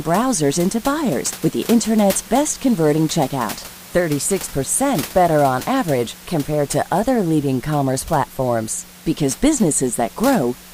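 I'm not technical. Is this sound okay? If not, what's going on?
Yes, no faults here, just some quiet background noise from the room, which sits well below the speech.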